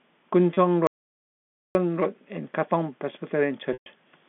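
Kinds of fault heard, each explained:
Packet loss with pitch repetition: Audio packets went missing, and the receiver filled each gap by repeating the last pitch period it had. The first gap, at 0.54 s, lasts 30 ms and sounds like a brief held, buzzy tone. The second runs from 3.73 to 3.86 s, about 130 ms. There the repeated period fades out over about 50 ms, leaving silence until the sound cross-fades back. Both gaps fit 10 ms packets.
Audio dropout to silence: From 0.87 to 1.75 s the sound cuts out completely for about 0.88 s. The gap is silent with no room tone at all. It is not a quiet passage. The recording kept writing silence while no input arrived, most likely because a link failed or the input was lost. Whatever was said in that stretch is gone, and the audio resumes abruptly, mid-flow, on the narrow telephone band of the line.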